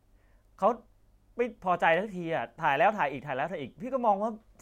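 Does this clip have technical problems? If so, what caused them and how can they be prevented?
Yes. At 1.94 s the audio stream likely skipped a handful of samples, well under a millisecond's worth: a case of dropped samples. The waveform leaps from one value to a later one, and that sudden step in the speech is heard as a single sharp click. Giving the capture and playback chain enough buffer headroom and a stable clock prevents samples from being skipped.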